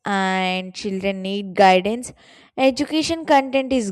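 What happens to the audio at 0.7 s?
Nothing goes wrong at 0.7 s: the speech carries on intact through that moment, with no fault to be heard.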